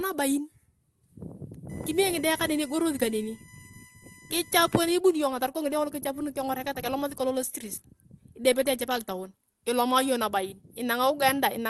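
USB whine runs from 1.69 to 4.84 s, ending just before "ani ibuni": USB frame timing leaks through power or ground as a fixed 1 kHz tone, strongest at its 2 kHz harmonic, sitting well below the speech.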